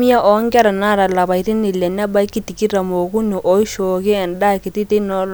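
Listening to this speech recording, nothing technical stood out as wrong at any point.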